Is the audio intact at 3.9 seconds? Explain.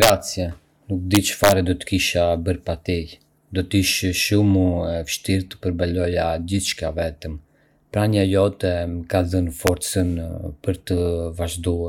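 Yes, at 3.9 s the speech runs through cleanly with no dropout, click, glitch or other audible fault.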